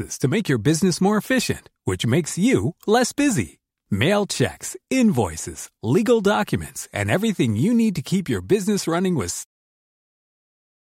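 No technical faults can be heard in the speech, and the only change in level is a deliberate, smooth fade-out at around nine and a half seconds.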